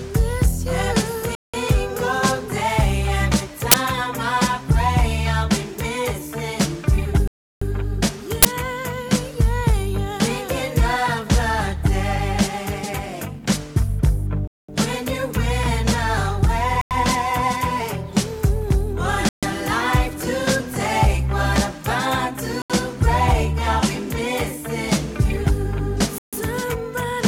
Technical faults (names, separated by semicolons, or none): Bluetooth stall; uninitialised buffer